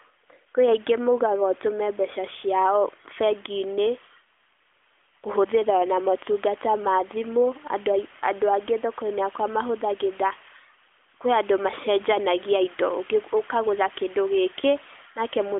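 No technical faults can be heard anywhere in the speech. It arrives through an AMR narrowband mobile codec, which holds it to the telephone band of about 200 Hz to 3.4 kHz with nothing above 3.6 kHz, and leaves only a light trace of codec coloring.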